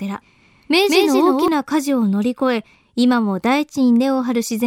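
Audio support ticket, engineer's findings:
Doubled audio track, 0.00–1.48 s, already under way at clip start. A second full-band copy of the speech trails by roughly a fifth of a second at about the same level as the original. Likely cause is a slower parallel capture path or a misaligned edit layering two copies. Not echo or reverb: a single repeat with no decay tail and no room colouration. The copy cuts out abruptly at 1.48 s.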